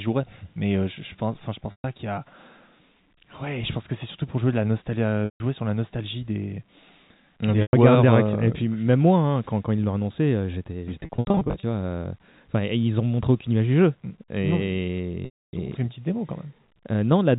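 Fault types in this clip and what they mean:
Packet loss with pitch repetition: speech packets were lost and the receiver filled each gap by repeating the last pitch period, so of the five gaps the short ones hold on a buzzy tone; the 280 ms gap near 15.25 s fades toward silence, and the scattered losses around 11 s come in runs of 70 ms or less.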